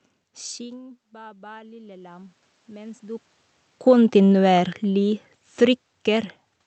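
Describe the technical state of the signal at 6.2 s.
At 6.2 s the automatic gain falling is still in progress, running from 3.72 to 6.41 s. The gain control judged the input too loud or its background noise too strong and is easing its gain down by about 5 dB, so the speech and the room noise beneath it sink together.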